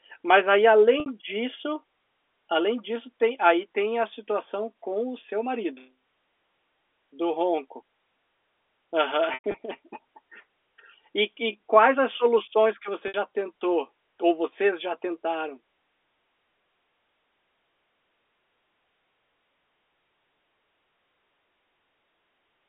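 Packet loss with pitch repetition interrupts the speech three times: 1.00 to 1.06 s, 9.34 to 9.54 s, and 13.08 to 13.14 s. Each time, the receiver filled the missing audio by repeating the last pitch period. The 60 ms gaps come out as a brief held, buzzy tone. At 9.34 s, 120 ms is lost across 200 ms, with a 100 ms run that fades toward silence before the speech cross-fades back in. The narrow telephone band of the G.711 line can be heard throughout.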